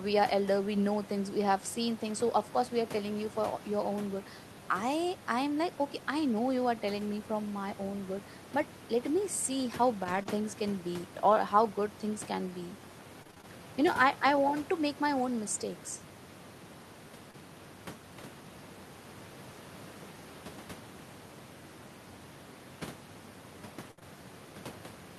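Speech with room noise about 19 dB below it carries scattered short gaps from 10.03 to 13.45 s, just after "see how". About seven lost or late packets, none longer than roughly 20 ms, were patched by extending the last sound. They show as tiny smeared or repeated slivers in the spectrogram. Short concealed packet loss at 17.31–17.35 s and 23.99–24.03 s leaves brief ticks or wobbles, about 20 ms each, visible as narrow stretches where harmonics blur or flatten. A burst of packet loss at 23.91–23.99 s drops about 60 ms. It is filled by a held, fading continuation that appears as a flat, decaying band in the spectrogram and a shrinking envelope in the waveform before real audio resumes.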